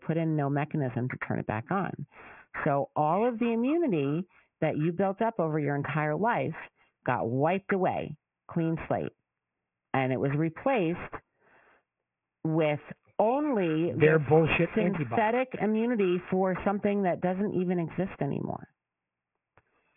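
Aliasing runs through the whole recording. The audio was brought down to a low sample rate without first removing the high frequencies. The band stops hard at 3 kHz, which fits a new rate of about 6 kHz. Everything that was above that edge folds back below it at wrong, unrelated pitches. The folded energy sits roughly 15 dB under the speech. Sibilants turn gritty and metallic, with a harsh, crowded top end.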